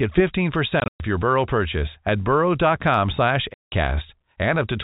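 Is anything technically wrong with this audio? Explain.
Yes. Packet loss filled with silence at 0.8 to 1.0 s and 3.54 to 3.72 s: lost packets were replaced by silence, leaving holes of about 160 and 180 ms that fit 20 ms packets, heard over the 4 kHz telephone band of G.711.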